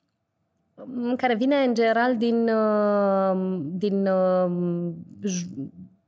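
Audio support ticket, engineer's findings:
Listened to the full speech recording and nothing stood out that needs follow-up.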